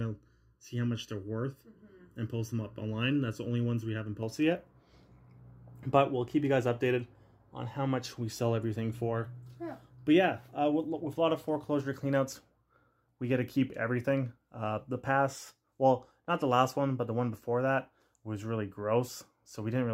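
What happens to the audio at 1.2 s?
At 1.2 s the audio is inside a stretch of channel delay comb filtering running from the start to about 4.23 s. One channel trails the other by under a millisecond, and summing them carves fixed notches from around 700 Hz upward, giving a hollow, phasey tone. Unlike flanging, the notches never sweep.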